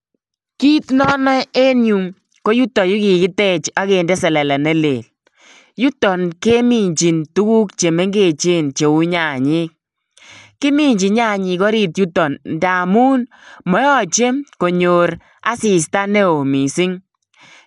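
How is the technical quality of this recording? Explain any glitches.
The recording has clearly audible codec damage throughout. The speech sounds dull, with nothing above 11.4 kHz and a rough, fluttering noise around tonal parts. This is likely Dolby Digital compression at a starved bitrate, which fits roughly 64 kbps: the encoder narrows the band and gives many frequency lines no detail, so the decoder fills them with noise.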